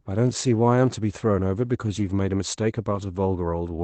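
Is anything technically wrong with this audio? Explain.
Yes. At 1.99 to 2.01 s and 2.91 to 3.01 s there is a lost packet rebuilt from error correction. The Opus decoder filled each loss (20 ms, which fits one packet, then 60 ms, which fits three) with the low-bitrate redundant copy carried in the following packet. As a result, these stretches sound rougher and noisier than the surrounding 8 kHz-band speech, but there is no gap.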